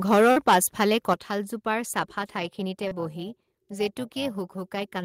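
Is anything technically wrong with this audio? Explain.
Yes, there are three kinds of fault in this speech clip.

Microphone overload runs from 0.11 to 1.14 s. The input was driven about 8 dB beyond what the converter could represent. That is likely because the microphone's input volume was set too high. The peaks were flattened at the converter's limit, with around 7 percent of samples clipped. Squaring off those tops adds harmonics that weren't in the original sound, so the loudest syllables in that first second carry a harsh, crackly, gritty edge.

Microphone volume stepped down happens twice, at 0.14 s by about 2 dB and at 1.14 s by about 7 dB. The level was likely cut in a single step by call software reacting to the overloaded input. Voice and background fall together, abruptly rather than in a fade. The larger drop lands exactly where the clipping stops, so the audio suddenly sounds both quieter and cleaner.

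Short concealed packet loss occurs from 0.31 to 0.37 s, where about 50 ms went missing, and from 2.88 to 2.92 s, where about 30 ms went missing. Those stretches never reached the decoder in time. The receiver bridged each gap by extending the preceding sound, then blended back into the real audio. Each one comes across as a brief smear or wobble, and a short consonant falling in the gap can disappear.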